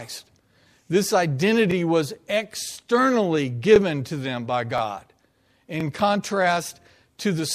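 Speech with overlapping chunks: about 23 ms of audio plays twice at 1.71–1.74, 2.74–2.76, 3.76–3.78, 4.78–4.81 and 5.81–5.83 s. The audio was handled in 1.0-second chunks, each starting slightly before the previous one ended, so every join repeats a sliver and stutters. Unlike dropouts, nothing is missing, only doubled, and the strict roughly one-second spacing rules out random clicks.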